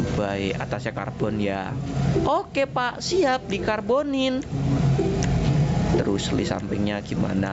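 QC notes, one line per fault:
Throughout, gain pumping: the level pumps up and down, a breathing, see-sawing effect with a swing of about 20 dB, while loud and quiet passages sit squashed close together in level. The likely cause is input gain set far too high for the microphone, with a fast limiter or compressor clamping down on each peak and releasing in the pauses. The band still stops at 8 kHz.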